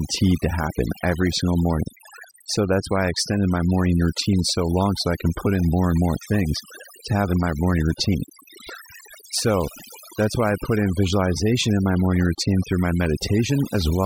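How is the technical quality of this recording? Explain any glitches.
The technical quality is compromised by overdone noise removal, which runs through the whole speech recording. A noise reduction stage set far too aggressively pulls individual frequency bands down or out whenever they sit near its noise estimate, taking the softer parts of the voice along with them. The pauses fall to near silence dotted with twinkling specks. On a spectrogram the background shows scattered isolated bright dots, and the harmonics look ragged with gaps.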